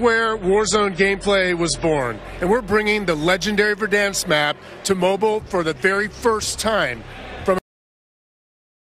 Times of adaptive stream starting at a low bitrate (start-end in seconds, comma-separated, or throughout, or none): 0.00-2.00